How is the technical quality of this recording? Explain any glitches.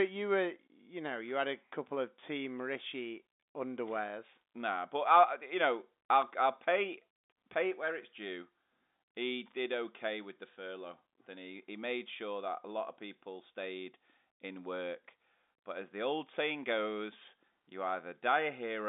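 No glitches appear; the telephone-band speech sounds intact.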